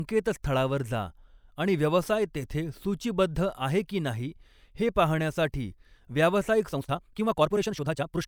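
From 6.66 s to the end, the speech suddenly rushes ahead at about 1.83 times its earlier pace. The pitch does not rise. It sounds hurried. This is a time-stretched section, likely squeezed by software that dropped short slices to shorten it.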